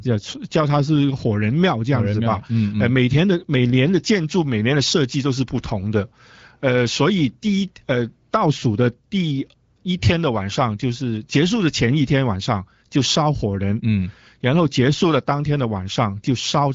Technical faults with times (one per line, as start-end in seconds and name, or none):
none